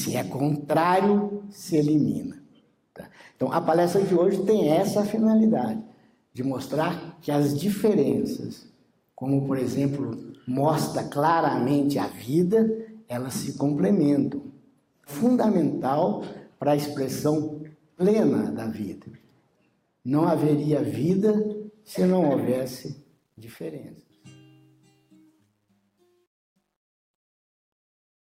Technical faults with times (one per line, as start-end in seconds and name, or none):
22.92-28.36 truncation distortion on a fade